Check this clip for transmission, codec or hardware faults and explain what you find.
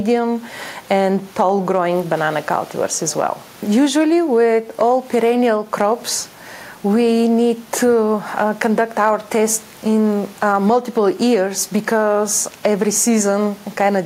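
Nothing here points to a transmission, codec or hardware problem, so there's nothing to flag in this one.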